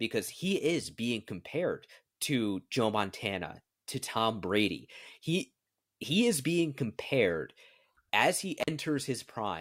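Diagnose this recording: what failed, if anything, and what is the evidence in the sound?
An intermittent contact in the analogue wiring breaks the speech just after "as he", between 8.60 and 8.70 s. For about 47 ms the signal path opens, as a loose plug or cable would, so the audio drops to a faint hiss, with crackle where the connection breaks and remakes. A network or buffer dropout would leave clean digital silence or a smoothed concealment. Here the gap has a noisy, scratchy edge and a residual hiss, which points to a physical contact fault.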